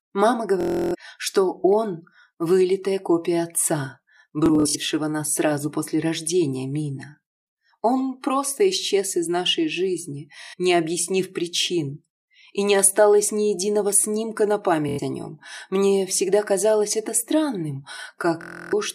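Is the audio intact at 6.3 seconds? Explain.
Yes, at 6.3 seconds the audio is intact, with no dropout, click, distortion or other fault at that point.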